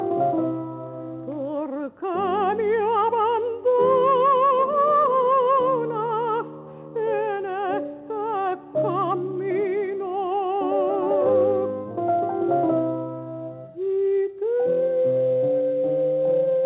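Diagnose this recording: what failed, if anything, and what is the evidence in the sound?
Nothing stood out on listening; the only thing audible is the narrow telephone bandwidth of the call path, with nothing above 4 kHz.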